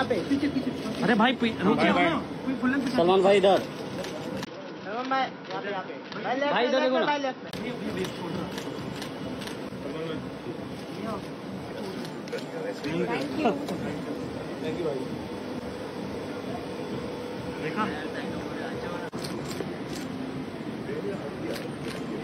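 At 4.45 s there's a 20 ms gap, then the sound goes dull and boxy, with nothing above 5.8 kHz, a drop of roughly 5 dB and a faint new noise floor until 7.53 s. That's likely the input switched to a poorer device, then back.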